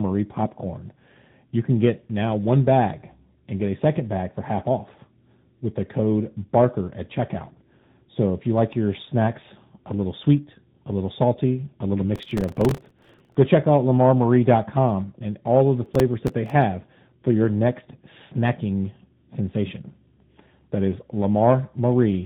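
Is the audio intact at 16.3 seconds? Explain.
No. From 15.86 to 16.50 s, just after "and all of the", there is processor overload crackle. The processor misses a run of deadlines on very short buffers, which points to buffers of roughly 1.5 ms, with about fifteen missed. Each miss replays a fragment of old audio with hard edges, producing a gritty tearing over the sound.

This moment is also affected by tandem speech coding, which runs through the whole clip. The speech passed through two speech codecs in a row, ending in AMR-NB at 10.2 kbit/s, with a G.711 link between. Each stage re-encodes the previous stage's errors, leaving speech rough, muffled and warbly, with nothing above 3.8 kHz.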